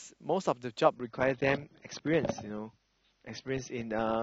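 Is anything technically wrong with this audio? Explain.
Yes. Adaptive stream at a lower bitrate, from 0.95 s to the end: the player switched abruptly to a leaner encoding, consistent with a slowed connection. The speech turns swirly with codec artefacts, with no gap. This fits an AAC stream dropping from about 96 to 27 kbit/s.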